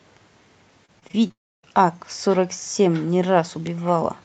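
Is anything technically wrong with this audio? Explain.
Yes, two network problems hit this speech clip back to back.

From 0.85 to 1.31 s there's repeated packet loss with a robotic sound. Five short holes, the longest around 27 ms, get patched by stretching the previous audio. That's roughly a quarter of that stretch, so it comes out choppy.

Right after, from 1.31 to 1.65 s, the sound smears into a brief fading buzz or hiss, then drops to silence for about 280 ms before resuming. That's likely a long network dropout, with roughly 320 ms of audio never played.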